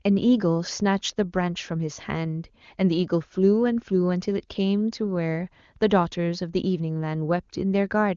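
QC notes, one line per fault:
No faults to note in this clip.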